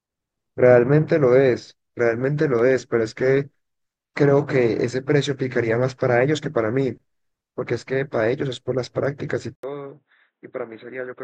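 At 9.55 s, after an 80 ms gap, the speech turns dull and boxy, with nothing above 3.9 kHz, drops roughly 10 dB, and gains a new noise floor about 50 dB down until the end, likely an input switched to a poorer device. The gap and the shifts in level and noise set it apart from a simple bandwidth cut.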